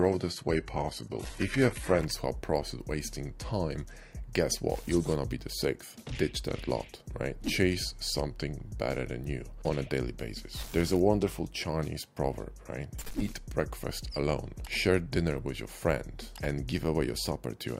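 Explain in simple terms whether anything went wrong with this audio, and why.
For the first 2 seconds, the sound is dull and smeared, with the crisp top end missing or replaced by a thin, artificial sizzle. At 2.0 s it suddenly becomes clearer and fuller. This is an adaptive stream starting at a low bitrate: the player began with a cheap, heavily squeezed version so playback could start quickly, then switched to a better one once it had measured the connection. Unlike a dropout or stutter, the change happens without any gap or silence.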